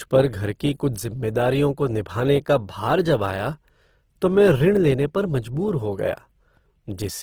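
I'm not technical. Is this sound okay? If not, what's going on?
No. From start to finish, the speech has a rough, grainy texture, and that damage is plainly audible. This is most likely Opus compression, a way of shrinking audio files. Here it was squeezed hard. When the encoder runs short of space, it fills gaps with copied or noise-like sound instead of the real detail. The top end still reaches very high, so it isn't muffled. It just sounds gritty and noisy.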